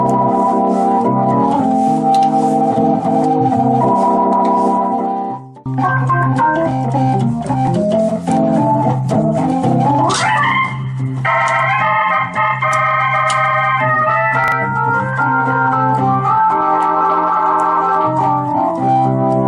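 At 14.44 to 14.52 s the sound briefly jumbles. These are chunks out of order: a 40 ms chunk played one chunk late, creating three hard joins.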